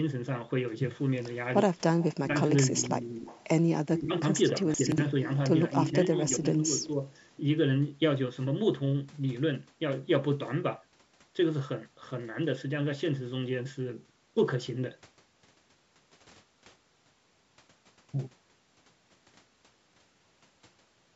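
From 1.81 to 3.44 s a faint, delayed double of the speech trails the talker by about 273 ms, roughly 20 dB below it. This is an echo leak: the far end was likely playing the call over a loudspeaker, and its echo canceller let part of the pickup return. Within that stretch, from 2.27 to 3.27 s, the talker's own speech sags by up to about 15 dB for around half a second in total. That is speech suppressed in double talk. With both sides active, the canceller likely could not tell the local voice from the returning echo and attenuated both.

The same suppression returns from 3.99 to 7.11 s, with dips again reaching about 15 dB over roughly one and a half seconds of the span. Inside it, at 4.74 to 4.98 s, there is a short jumbled moment. These are chunks out of order: a 60 ms piece plays three chunks late, after audio that should have followed it, which leaves three hard joins.

The echo leak reappears at 5.71 to 6.22 s, weaker at about 25 dB down, and again briefly at 6.82 to 6.87 s at about 20 dB down. 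Both times it is the same 273 ms delayed copy, likely from the same incomplete cancellation. Throughout the clip the call microphone processing is present as a band limit, with nothing above 8 kHz.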